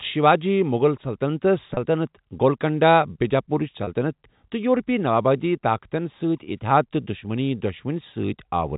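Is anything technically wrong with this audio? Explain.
Yes, there is packet loss with pitch repetition, at 1.74–1.77 s and 3.84–3.87 s. Each gap is 30 ms, consistent with one lost packet. The receiver fills it by replaying the last pitch cycle, so the speech briefly sounds held and buzzy. A waveform shows repeating cycles that fade in level, and a spectrogram shows frozen, evenly spaced harmonic bands. The G.711 telephone band limit at 4 kHz stays visible throughout.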